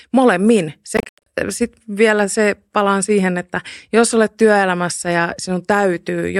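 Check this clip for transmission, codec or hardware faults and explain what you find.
One fault is present, between 0.97 and 1.26 s. The speech breaks into short silent holes totalling 203 ms over 290 ms, the longest 87 ms. Each resumes as if it had played on. This is likely a Bluetooth dropout, with late packets discarded before reaching the headphones.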